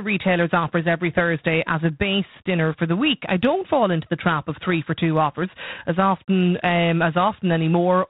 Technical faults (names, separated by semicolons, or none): G.726 ADPCM